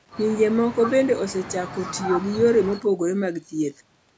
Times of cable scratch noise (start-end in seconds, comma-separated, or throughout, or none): none